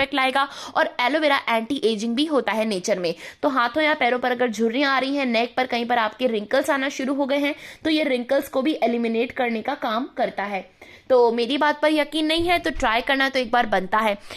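Nothing in the audio stood out as a technical problem on listening.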